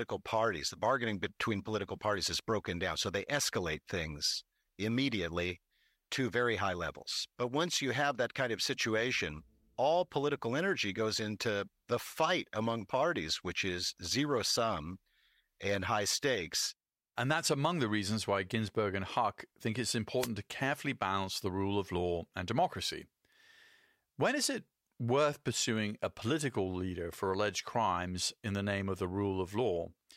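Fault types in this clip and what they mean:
Wireless microphone noise hit: a brief swish of static, about 0.12 s long, cuts across the speech at 20.18 to 20.29 s. The analogue FM radio link momentarily fades as reflected signals cancel, letting receiver noise rise over the voice.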